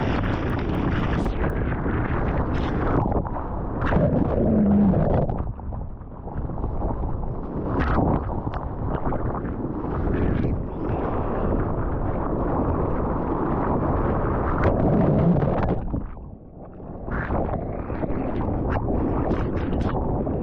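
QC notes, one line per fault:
0.0–1.5 s, resampler restarted on every block: regular ticks at 4 per second. The audio appears to have been converted in 250 ms blocks, with the converter restarting at each one. At every block edge it lacked the neighbouring samples and used silence or the wrong end of the block instead. Each edge therefore carries a small error, heard as a tick. The ticks ride on the signal. The upsampling points to a doubling of rate, such as 24 kHz to 48 kHz.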